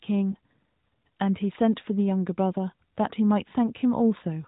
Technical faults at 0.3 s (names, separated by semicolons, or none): lost AMR speech frames